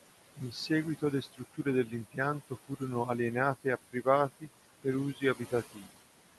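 A speech recording with noise suppressor artifacts throughout. The suppressor pulls steady room noise down by about 17 dB between phrases. Speech cut by the noise suppressor occurs from 0.36 to 2.82 s, from 3.64 to 4.06 s, and from 4.83 to 6.0 s. The suppressor mistakes quiet speech for noise and lowers it by about 16 to 19 dB. Roughly half a second, a tenth of a second and under half a second of sound come out swallowed or faint. The room noise itself sits about 13 dB below the speech, and the call codec's top end sits near 12 kHz.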